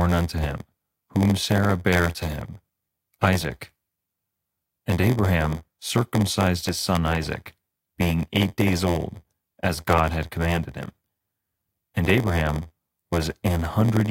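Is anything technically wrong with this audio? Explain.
Yes. Throughout the speech there is a block size mismatch, padded with zeros. Each stage hands over blocks shorter than the next one reads, so the shortfall is filled with silence and a tiny gap lands in every block. That gives a steady buzz at about 86.1 Hz, which fits a 512-sample read block, and the speech runs slow at 0.938 times normal speed with its timbre unchanged. A sample-rate error would shift pitch along with speed, and random dropouts would not buzz at a fixed rate.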